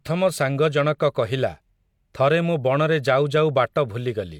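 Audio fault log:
No fault is present in this speech clip.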